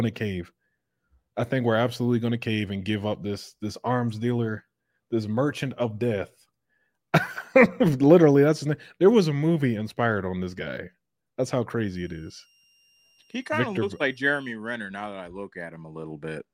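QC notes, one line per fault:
11.95 to 14.49 s, switching supply whistle: a thin, steady high whistle sits under the speech, roughly 3 kHz and about 40 dB below it; the pitch wanders slightly between 2.78 and 2.81 kHz rather than holding still. That sound comes from a switching power supply dropping into an audible burst mode or beating against another supply, so its switching rate lands in hearing range and shifts a little as the load on it changes.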